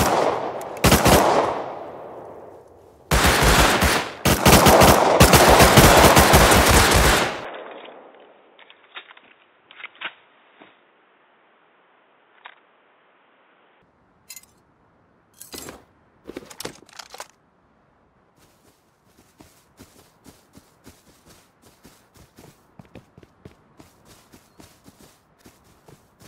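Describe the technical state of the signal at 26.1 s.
At 26.1 s the signal is intact, with no audible dropout, distortion, noise burst or other fault at that point.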